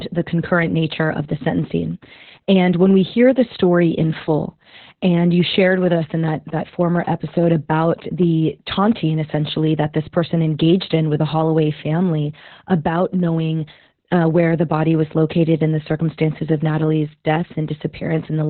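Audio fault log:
Throughout: Opus voice compression. The speech runs through the SILK coder in narrowband mode at about 8 kbps, so nothing survives above roughly 4.3 kHz. The excitation is coded coarsely in 20 ms frames, leaving the voice muffled, hoarse and slightly robotic.
5.40–8.24 s: GSM signalling bursts, starting after "story in full and" and ending before "taunting essentially that this". A nearby 2G phone's signalling bursts are rectified by the audio circuit, giving a galloping pattern of short 217 Hz buzzes at a low level under the speech.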